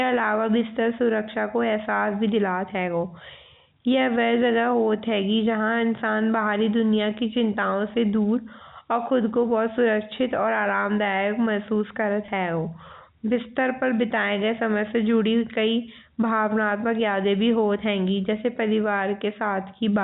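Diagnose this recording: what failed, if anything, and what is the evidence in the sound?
Network stage: packet loss with pitch repetition at 12.26 to 12.28 s. About 20 ms of speech briefly holds on a slightly buzzy, sustained tone. The receiver bridged the gap, which fits a single lost packet, by repeating the last pitch period.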